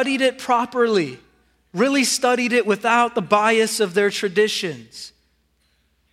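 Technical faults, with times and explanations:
No technical faults are audible anywhere in the speech.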